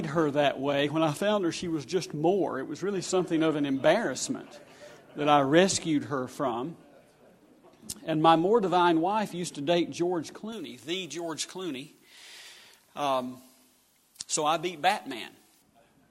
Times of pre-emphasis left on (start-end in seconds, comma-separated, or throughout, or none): 10.52-15.62